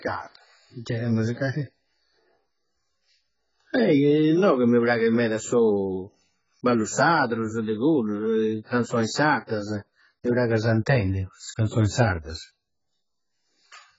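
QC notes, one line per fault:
Throughout: AAC compression, likely at a very low bitrate near 12 kbps. Nothing survives above 7.6 kHz, so the speech sounds dull and smeared, with warbling, fizzy sibilants. A spectrogram shows a hard ceiling at 7.6 kHz and patchy, holed bands beneath it.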